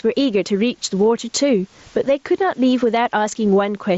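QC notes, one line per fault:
throughout, gain pumping: The input gain is likely set far too high for the microphone, so a fast limiter or compressor has to clamp down each time the speech gets loud. The level swings by about 15 dB. Loud and quiet passages sit unnaturally close together, and the result sounds flattened and squashed.
3.05 s, concealed Bluetooth headset packet loss: A short gap of about 7.5 ms, which fits a single lost frame on the headset link, was patched by the receiver. It carried the waveform on by repeating the best-matching piece of the preceding 20 milliseconds or so. Because only one stretch went missing, the repair is almost seamless. The wideband mSBC headset path around it carries the speech normally.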